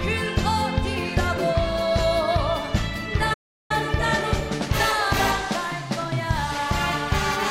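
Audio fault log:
3.33–3.71 s, playback stall: the sound cuts off in mid-flow and the output stays silent for about 0.36 s before it resumes. This likely happened because the player ran short of incoming data or its playback thread was held up, leaving nothing to send to the output until it caught up. The stop is abrupt rather than a fade, because the audio simply ceases at the point where the supply ran out.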